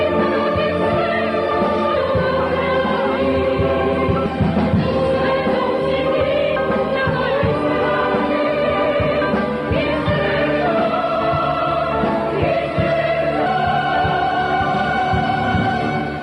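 At 1.96, 6.56, 8.86, 11.16 and 13.46 s the sound jumps abruptly, each time dropping roughly a fifth of a second. This is audio missing between chunks, likely from a recorder handling the sound in 2.5 s blocks and losing a short stretch at each handover. The cut edges are spliced directly together, so there is no silent gap as a dropout would leave. The steady 2.3 s spacing of the later skips marks it as periodic rather than random loss.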